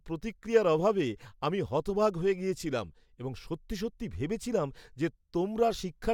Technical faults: none

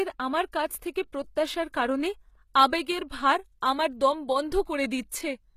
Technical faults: HE-AAC compression; pre-echo

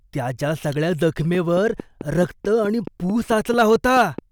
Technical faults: train of clicks; hard clipping

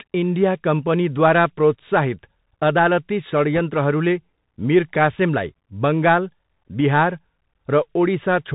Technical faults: Bluetooth CVSD headset codec; bit errors on a Bluetooth voice link

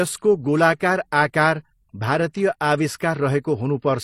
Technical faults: transcoding between lossy codecs

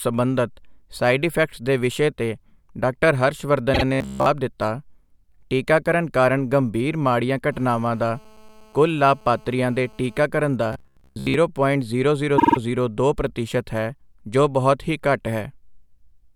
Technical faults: repeated frames; robotic sound from repeated short buffers; GSM phone buzz

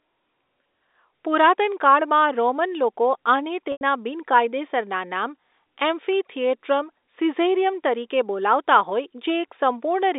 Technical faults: packet loss with pitch repetition

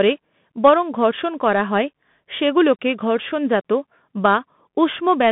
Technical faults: Bluetooth CVSD headset codec

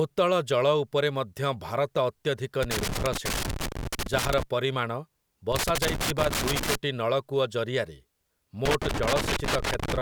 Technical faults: loose connector crackle

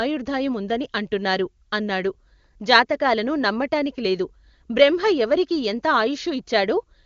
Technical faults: none

